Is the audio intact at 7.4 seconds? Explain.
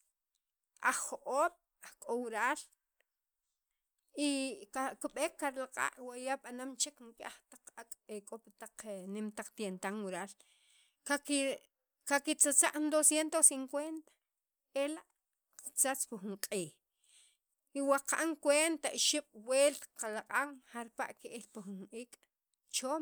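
Yes, the speech at 7.4 seconds is intact, with no dropout, glitch or other fault at that moment.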